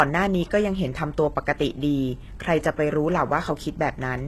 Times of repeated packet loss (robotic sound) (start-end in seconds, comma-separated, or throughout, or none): none